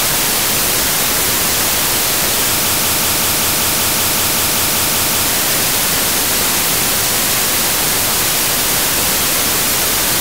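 The playback or streaming chain likely stalled at 2.69 s and kept resending its last buffered fragment, a broken-record loop. A 191 ms slice repeats exactly, back to back, thirteen times until 5.26 s, stuttering mechanically while the intended audio is lost.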